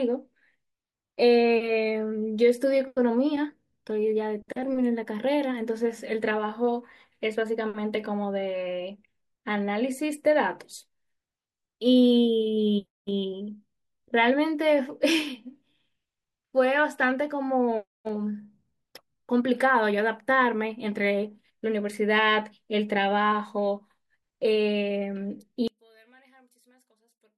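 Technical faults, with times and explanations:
25.68 to 27.37 s, one channel inverted: the speech suddenly falls by about 36 dB to a faint residue, likely because one stereo channel's polarity flipped, cancelling the centred voice when summed to mono. Unlike a dropout, something remains.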